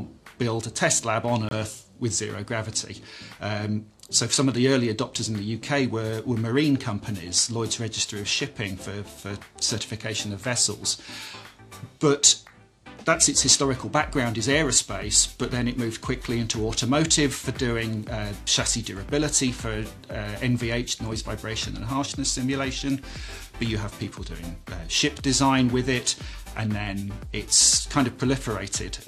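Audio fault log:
1.49–1.53 s, corrupt frame muted: damaged bits in a compressed frame made the decoder reject it, and the player substituted silence. The result is an abrupt 40 ms dropout, a length that fits a single lost frame, with the surrounding timing unchanged.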